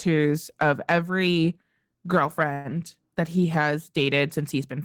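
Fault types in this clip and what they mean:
Call audio freeze: The speech stalls from 2.53 to 2.68 s. In that span the last sound is carried on as a buzz or hiss that fades, filling 114 ms. It never drops to silence. When the speech resumes, it picks up exactly where it stopped. Nothing is lost, but everything after runs 114 ms late. The likely cause is delayed packets emptying the receiver's jitter buffer, so it stretched the last sound until audio arrived again.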